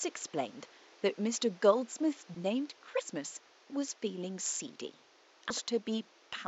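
At 2.35 s and again at 5.50 s there's a quick glitch from damaged data in the compressed stream: the decoder loses sync and skips ahead to the next frame. Faint room noise, about 29 dB down, sits underneath.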